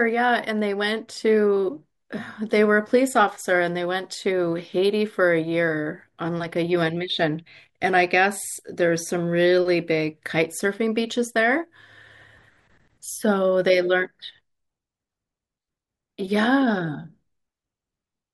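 From 0 to 12.8 s the speech carries a 100 Hz buzz: the resampler restarted on every block, converting 48 kHz to 44.1 kHz in 10 ms pieces that each lack their neighbours' samples. Unlike mains hum, it vanishes in pauses.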